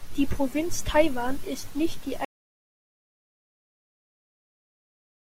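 At 2.25 s, right after "ist nicht die", the speech cuts off in an audio dropout to silence that lasts to the end. The input was likely lost while recording continued, writing silence: no room tone remains, the waveform falls to a flat line, and the spectrogram goes blank.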